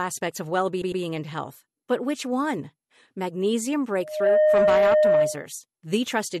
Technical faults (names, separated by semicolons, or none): repeated frames; loudspeaker feedback squeal